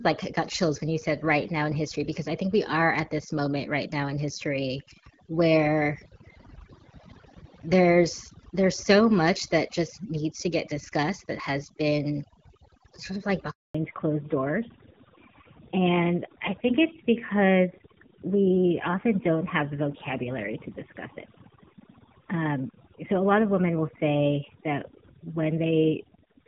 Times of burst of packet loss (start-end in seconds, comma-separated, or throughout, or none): none